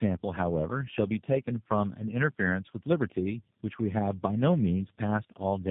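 Across the whole clip, the call appears to have passed through several separately coded links, and the sound points to about three speech codecs in series, ending in something like G.729A. Each coder re-encodes the previous coder's already damaged output, so the errors stack. That is tandem speech coding. The speech comes out rough, muffled and warbly, with nothing above 3.6 kHz, and it is duller and more smeared than one such codec alone would make it.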